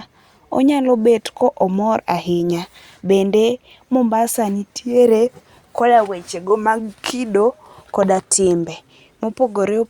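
No technical faults can be heard in this speech, so there is nothing to describe in time order.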